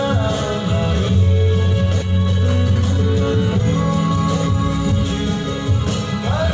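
Audio passed through a call path with the G.722 codec, which leaves nothing above 8 kHz, and it carries three timing faults. At 2.02 to 2.04 s there is a skip ahead: about 0.7 s of sound never plays, and the two sides are spliced together with no silence or concealment fill. That missing silence is what sets it apart from a dropout. The sudden jump points to queued audio being discarded so playback could catch up. Right after, from 2.11 to 3.63 s, comes a jitter buffer speed-up. The sound runs at 113% of normal speed, trimming roughly 0.2 s, as the receiver cuts many short pitch-period pieces to shrink an oversized buffer. A milder speed-up at 103% follows from 4.09 to 4.93 s and removes only a few tens of milliseconds. The first stretch sounds hurried, in both the pitch stays put, and that unchanged pitch separates them from a sample-rate error, which would raise pitch along with speed.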